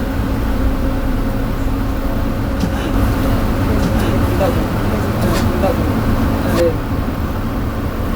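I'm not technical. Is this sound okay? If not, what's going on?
No. From 2.94 to 6.60 seconds there is a doubled audio track: a second copy of the sound plays roughly a second behind, about as loud as the original, and cuts in and out abruptly. It likely comes from the audio being captured twice.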